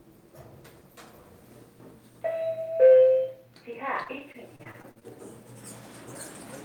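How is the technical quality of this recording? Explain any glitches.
Quality dips toward the end. Between 4.03 and 5.03 s there's repeated packet loss, giving a choppy, robotic edge. About ten short holes open up, each patched by stretching the previous bit of sound. The longest is 42 ms, and roughly a fifth of that second is filler.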